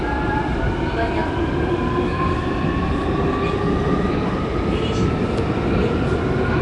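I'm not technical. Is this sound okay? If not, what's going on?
No. The sound was most likely squeezed through Nellymoser compression, an old codec once used for Flash microphone audio. It cuts sound into small blocks and spends very few bits on each; weak frequency bands get nothing and are filled in with made-up noise. Throughout the clip that leaves a rough, hissy fuzz around everything and a smeared, underwater quality, and nothing above about 10.6 kHz survives, so the top end sounds dull.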